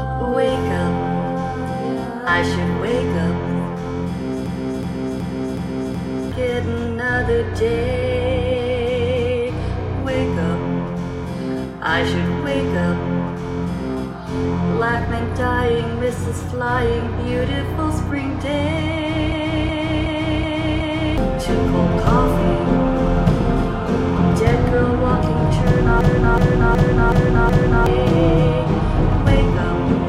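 A system hang loop occurs at 4.46 to 6.32 s, 19.32 to 21.18 s and 26.01 to 27.86 s. Each time, the host stalled while the hardware kept replaying its ring buffer, which fits a 16384-sample buffer. A 0.37 s slice repeats exactly five times, a stutter at 2.69 Hz, and about two seconds of audio are lost. Unlike a dropout, the gap is filled with identical repeats rather than silence.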